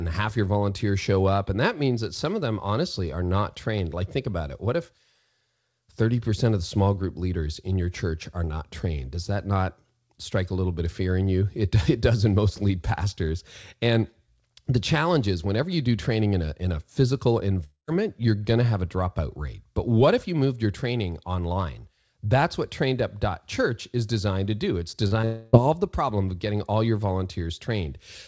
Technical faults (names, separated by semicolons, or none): long network dropout; short concealed packet loss